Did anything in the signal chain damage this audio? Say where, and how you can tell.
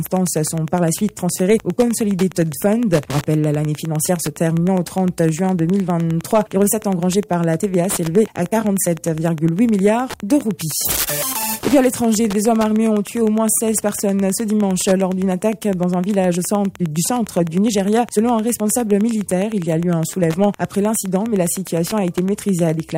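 Yes. Wi-Fi interference got into the analogue wiring and runs through the whole clip. A steady ticking repeats every 102.4 ms, just under ten times a second, sitting roughly 20 dB below the main sound. That spacing is a Wi-Fi beacon interval: a nearby radio's bursts are rectified by the circuit and become audible clicks. Mobile-phone buzz would be a much faster, droning 217 Hz pattern, and mains hum a continuous tone rather than separate ticks.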